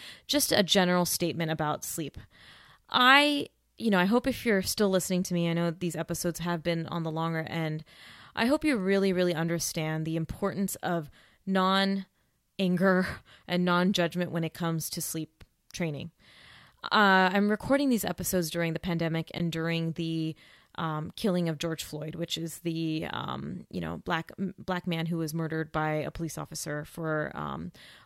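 At 19.38 s, a packet likely dropped on the wireless link causes a Bluetooth dropout: the speech falls silent for 14.5 ms, a gap that fits one lost packet, then resumes further along.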